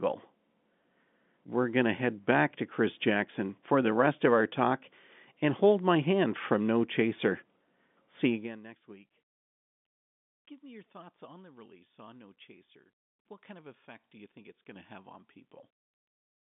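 No faults: the speech sits in a G.711 mu-law telephone band with nothing above 3.8 kHz, and the gradual level shifts are ordinary fader-style moves.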